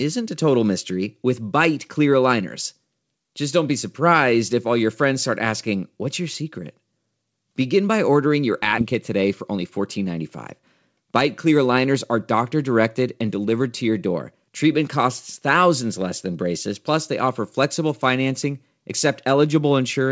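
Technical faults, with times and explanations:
8.78 s, skip ahead: about 0.7 s of speech was discarded, probably when a backlog of delayed audio overflowed the jitter buffer. Playback lurches forward with no gap or fill, so the sound on either side of the jump is spliced straight together and a chunk of the phrase is simply missing.
8.92 to 10.05 s, jitter buffer speed-up: with the buffer still holding more audio than it aims for, the receiver trimmed many short pitch-period pieces, removing roughly 70 ms in total. Speech runs about 6% fast at unchanged pitch, sounding slightly hurried. Bandwidth ends at 8 kHz, which fits the G.722 call path.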